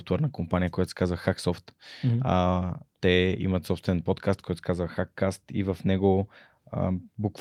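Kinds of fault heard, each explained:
Lost packet rebuilt from error correction: a packet went missing, but the next one carried a low-bitrate backup copy, so the decoder played that copy instead of leaving a hole. You won't hear a gap, just a brief 20 ms patch where the speech turns rougher and noisier. That happens twice, from 2.39 to 2.41 s and from 3.25 to 3.27 s, just before "имат собствен подкаст който". Each patch is about the length of a single lost packet.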